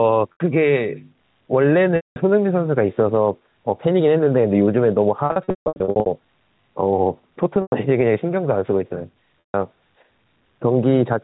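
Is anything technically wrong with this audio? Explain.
Yes, two faults are present.

Gain pumping runs through the whole clip. The gain swings by around 5 dB, so the delivery sounds squashed. This is likely an input gain set far too high, with a fast limiter clamping each peak and then releasing. On a waveform the envelope looks flattened.

Packet loss with pitch repetition occurs at 0.33 to 0.40 s (80 ms lost), 1.96 to 2.16 s (200 ms), 5.26 to 6.06 s (540 ms scattered across about 0.8 s, longest run 160 ms), 7.62 to 7.72 s (100 ms) and 9.41 to 9.54 s (140 ms). The gaps fit 20 ms packets. The receiver fills each hole by repeating the last pitch cycle. The short losses come out as a held, buzzy tone, and the longer runs fade to silence before the speech cross-fades back in. A spectrogram shows frozen horizontal harmonics that dim into blank columns. The waveform shows identical repeating cycles with a decaying envelope, and the 5.26 to 6.06 s stretch looks choppy and broken up.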